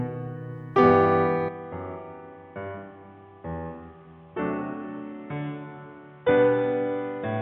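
At 1.49 s the music abruptly turns dull and boxy and stays that way to the end, with no gap at the change. Everything above about 3.8 kHz is gone, the level drops by roughly 10 dB, and a faint new background noise appears well below the music. This is likely the input switched to a poorer device, a narrower-band microphone or headset path with its own tone, gain and noise floor.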